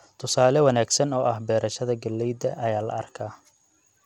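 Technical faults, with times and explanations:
Throughout, Bluetooth SBC compression: the speech carries a gritty grain, and the treble flickers in and out, likely from SBC at a starved bit pool, around 96 kbps by the sound, leaving upper sub-bands bitless and the rest coarsely quantised.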